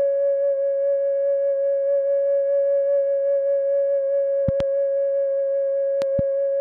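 A music clip with two loud pop faults: a sharp double thump at 4.48 to 4.63 s and another at 6.02 to 6.21 s, each pair peaking roughly 10 dB above the music, which carries on beneath them. The likely cause is a sudden voltage step or pulse entering the signal path, as from a plug, switch, static discharge or driver glitch, which the downstream circuitry shapes into these brief transients.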